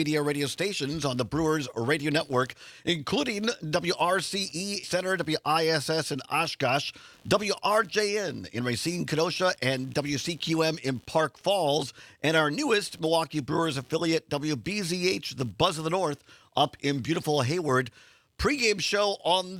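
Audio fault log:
throughout: computer activity noise, a faint buzz pulsing around 70 per second, some 35 dB below the sound, following machine load rather than the audio itself.
4.83 s: skip ahead, playback jumps forward with no gap, losing roughly 0.7 s outright; unlike a dropout, nothing is silenced, the two sides simply butt together.
7.23 to 10.89 s: jitter buffer speed-up, audio runs about 6% fast at unchanged pitch as tiny pitch-period slices are trimmed, shedding roughly 0.2 s of backlog.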